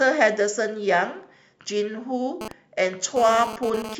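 A nearby 2G phone exchanging data sends radio bursts that the audio circuitry rectifies, causing GSM phone buzz from 2.41 to 3.95 s: a hard, raspy 217 Hz buzz with many harmonics, about 10 dB below the speech, that comes and goes.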